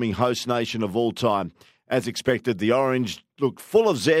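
A hiss-like roughness rides on the speech from start to finish, growing with louder and brighter sounds and dropping away in the pauses. This is sample clock jitter: an unsteady converter clock of a few microseconds puts the error roughly 35 dB below the speech.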